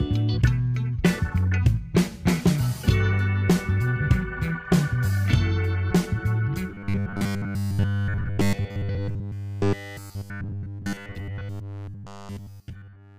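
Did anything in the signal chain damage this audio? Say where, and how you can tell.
Yes. From 6.7 s to the end, the audio turns into a rigid, metallic buzz at a fixed 100 Hz, a robotic sound from repeated short buffers. At the driver or buffer stage, most of the span is likely a 10 ms block replayed whenever fresh samples arrived too late.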